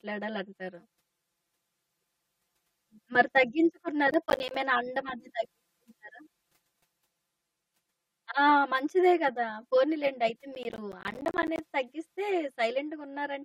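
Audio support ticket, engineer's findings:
Channel delay (comb filtering), whole clip. Speech sounds hollow and phasey, with fixed notches. One channel runs roughly 5 ms late before the mono sum. Shared content cancels at evenly spaced frequencies, the first near 100 Hz. Check the channel alignment in the mixdown.

Processor overload crackle, 4.11–4.55 s and 10.55–11.59 s. Gritty tearing rides on the speech, then stops. The processor is missing deadlines. The dropouts fit buffers of about 10 ms, each missed one leaving silence. That points to a dozen or so misses, then several dozen. Check CPU load.

Compressed frames skipped, 9.90–9.97 s. The audio jumps ahead. Roughly 20 ms of audio is missing. Check for file corruption or decoder frame rejection.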